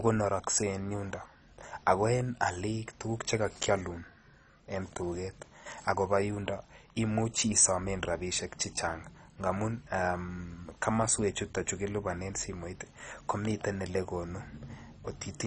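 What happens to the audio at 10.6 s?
At 10.6 s the speech sounds dull and gurgling, with nothing above about 10.3 kHz, as it does throughout; likely MP2 compression at a very low bitrate switching off starved upper sub-bands.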